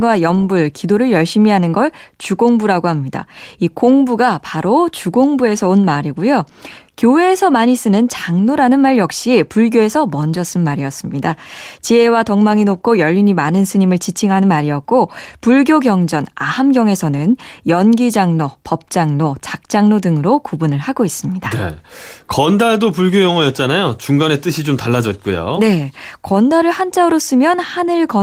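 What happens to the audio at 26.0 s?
Nothing goes wrong at 26.0 s; the speech carries on intact through that moment, with only the light coding character of the Opus voice compression it runs through.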